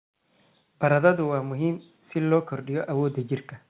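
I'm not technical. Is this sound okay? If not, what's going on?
No. From about 1.25 s to 3.27 s there is an automatic gain rising fault: the call's volume control judged the input too quiet and slowly turned it up, so the voice and the background swell louder together over those two seconds, with a narrow phone-like tone throughout.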